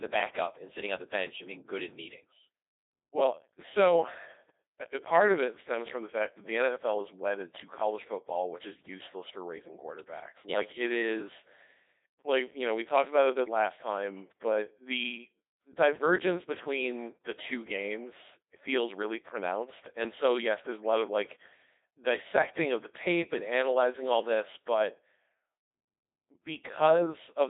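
Codec 2 vocoder throughout: the speech is resynthesised from sine waves, sounding robotic and buzzy, confined to 300 Hz to 3.7 kHz, which fits 2.4 kbit/s.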